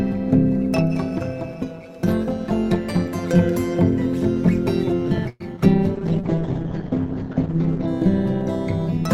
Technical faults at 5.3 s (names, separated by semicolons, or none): overlap-add ripple; call audio freeze